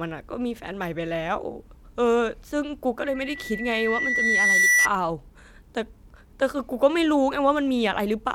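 From 3.05 to 4.89 s, loudspeaker feedback squeal rises through the speech. The microphone is picking up its own loudspeaker, and the loop gain exceeds one at 2 kHz. That pure tone swells over about a second and a half, peaking roughly 5 dB above the speech.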